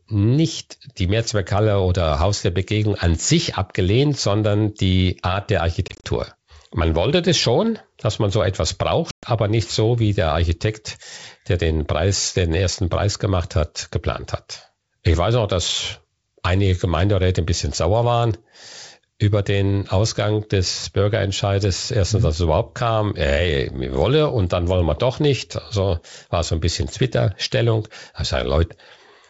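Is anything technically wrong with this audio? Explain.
Yes, there's packet loss on an ADPCM call. Around 5.88 to 6.05 s, about 100 ms drops out in short bursts of up to 30 ms, and at 9.11 to 9.28 s there's a 120 ms hole. Each gap goes hard to silence. Afterward the decoder's predictor and step size no longer match the sender's, so the speech comes back clicky, distorted, or at the wrong level until it settles. The wideband G.722 sound itself stays clear.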